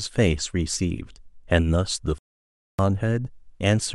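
A playback stall at 2.18 s drops the speech into silence for 0.61 s, until 2.79 s, likely because the player ran short of data.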